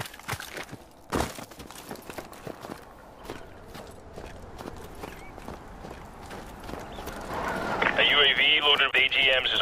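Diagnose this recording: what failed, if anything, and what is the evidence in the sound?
The failure is damaged data in a compressed stream, at the codec or storage stage. Two short disturbances occur, at 3.77–3.79 s and 8.90–8.94 s, each lasting only a few tens of milliseconds. Corrupted bytes reached the decoder there, so it misread those frames and resynchronised at the next valid frame. These are brief faults from corrupted frames, not a fault in the analogue path.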